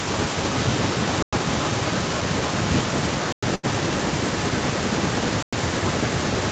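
From 0.13 s to the end, a faint second copy of the speech trails the original by roughly a third of a second (323 ms), sitting well below it, about 10 dB down. It sounds like a delayed repeat of the voice. This is an echo leak, likely from the far side playing the call over a loudspeaker while its echo canceller failed to fully remove what its microphone picked up, so that copy was sent back into the call.

At 1.23 s the audio drops out for 100 ms, then resumes exactly where it left off. The same hole returns at 3.33 s and again at 5.43 s, every 2 s. This regular spacing marks a gap between chunks: the audio was delivered in 2-second pieces, and each join leaves a short stretch of silence, though nothing is actually lost.

From 3.55 to 3.65 s, shortly after the second gap, the sound briefly smears into a held, fading sound before jumping ahead. This is a burst of packet loss. About 80 ms of audio never arrived, and the receiver covered the hole by stretching and fading the last sound it had, so the speech resumes further on with that piece missing.

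The audio is band-limited to 8 kHz, consistent with the Opus call path.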